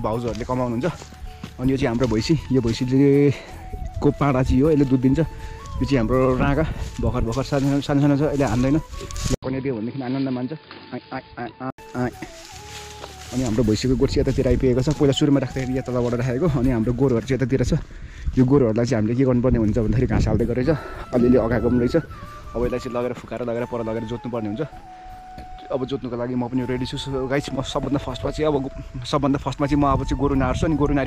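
At 9.35 s an 80 ms gap opens, then the sound turns dull and boxy, losing everything above 4.9 kHz, dropping a little in level and picking up faint new background noise. That's likely the input switched to a poorer device. It clears at 11.78 s.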